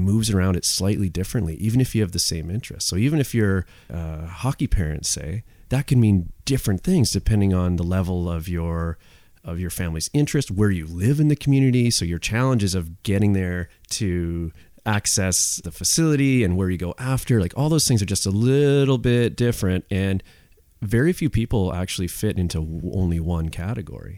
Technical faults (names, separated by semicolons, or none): none